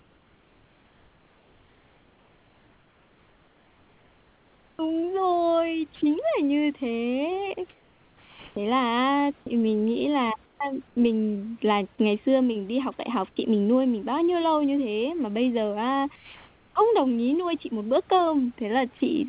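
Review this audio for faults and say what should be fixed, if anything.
Sound chopped by the voice detector, 0 to 10.97 s: about 5.9 s of quiet speech edges give way to flat noise, likely from voice-detector switching. A spectrogram shows speech striations alternating with smooth, uniform noise patches.

Comfort noise in place of the background, 16.16 to 16.76 s, between "mà bây giờ á" and "đồng ý nuôi chị": the background turns steady, featureless and about 3 dB quieter. On the waveform it appears as a flat, even noise band.

Sound dropped by the voice detector, 18.98 to 19.01 s: about 20 ms of speech gives way to noise. It shows as a brief notch where harmonics vanish into uniform hiss.

To prevent all three, disable discontinuous transmission or lower the voice detector's threshold and lengthen its hangover time so quiet speech keeps being sent.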